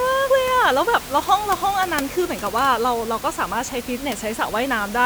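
No technical faults occur in this speech clip; the steady room noise, about 14 dB below the speech, is part of the recording.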